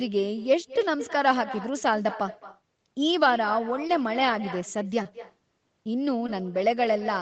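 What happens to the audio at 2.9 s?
Echo with no canceller is present at 2.9 s, as it is through the whole recording. The far end is playing the call over a loudspeaker, its microphone picks that playback up, and nothing subtracts it. The speech returns after the network round trip, roughly a fifth of a second later and about 15 dB quieter. Each phrase is trailed by a faint, thin copy, band-limited to 8 kHz by the Opus call path.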